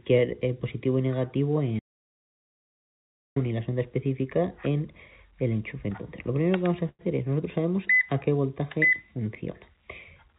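At 1.79 s the sound cuts out completely and stays out until 3.36 s, an audio dropout to silence lasting about 1.57 s. The input was likely lost upstream, through a disconnected device, a broken link or an accidental mute, while the recording carried on writing silence. Nothing survives in the gap, not even background noise. On a waveform this is a flat line with abrupt edges. On a spectrogram it is a fully black band across all frequencies, above which, as elsewhere in the clip, there is no energy past 4 kHz because of the narrowband call codec.

From 6.89 to 7.02 s there is a short stall from a late packet. A packet arrived late, the jitter buffer ran dry, and the receiver held and stretched the last sound for about 99 ms before continuing from exactly where it stopped. Nothing is lost, but the playback from then on sits about 99 ms later. It sounds like a brief smeared hold with a faint buzz. 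A spectrogram shows horizontally smeared, repeating frequency lines, and the waveform shows a small stretch of repetitive, slightly dipped cycles.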